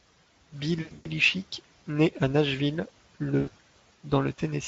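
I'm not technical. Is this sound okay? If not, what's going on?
No. This is VoIP packet loss concealed by the speech codec: chunks of the call's data never arrived, so the decoder guessed at the missing bits of speech. From 0.81 to 1.07 s and again from 3.39 to 3.49 s, the voice smears into a buzzy tone or a noise that fades.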